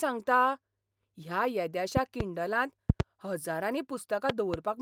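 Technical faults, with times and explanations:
1.97–2.23 s, 2.90–3.02 s, 4.30–4.56 s: loud pop, each a double pop about 15–20 dB above the speech, likely voltage pulses from a plug or switch; the speech continues beneath, unlike a dropout.
3.71–3.73 s: lost packet rebuilt from error correction. One 20 ms stretch is played from a low-bitrate backup copy, so it sounds briefly rougher and noisier but never goes silent.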